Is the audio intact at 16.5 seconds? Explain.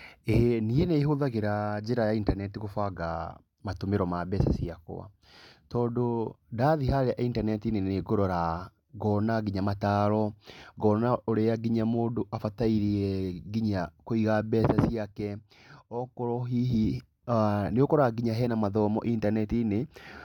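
Yes, at 16.5 seconds the speech plays through intact, with no audible fault at that moment.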